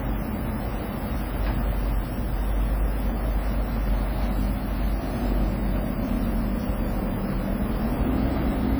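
WMA compression runs through the whole clip, from start to finish. The sound carries a ringing, washy smear, with a hiss that swells and fades along with the signal. This is likely the work of a transform codec with long blocks, which spreads quantisation noise over tens of milliseconds around each event. Weak spectral lines are dropped outright, and the heavy damage fits a bitrate near 32 kbps, even though content still reaches about 20.1 kHz.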